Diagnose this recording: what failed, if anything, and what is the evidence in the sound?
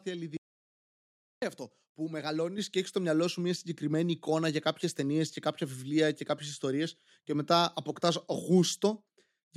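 The speech cuts to silence, with no room tone, from 0.37 to 1.42 s, losing about 1.05 s before "αυτό που". This is an audio dropout to silence, likely from lost device input while silence was written.

At 2.58 s, between "αυτό που" and "και έχει στο μυαλό", voice and background jump together by about 7 dB. Call processing stepped up the microphone volume in one move.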